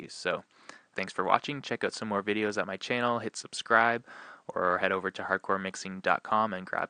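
No technical fault can be heard anywhere in the signal; its level, continuity and timing stay steady throughout.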